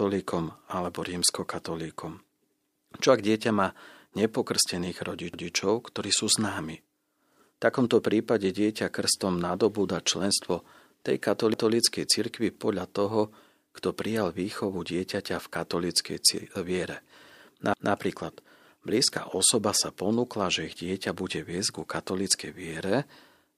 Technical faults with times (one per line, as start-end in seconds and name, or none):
11.54-11.74 overlapping chunks
17.74-17.94 overlapping chunks